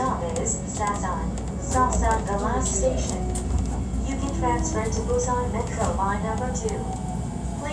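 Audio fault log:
Nothing to log here, as the audio comes through without any fault worth noting.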